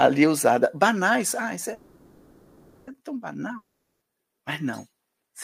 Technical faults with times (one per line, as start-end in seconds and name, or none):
1.73-2.89 call audio freeze
3.57-4.03 long network dropout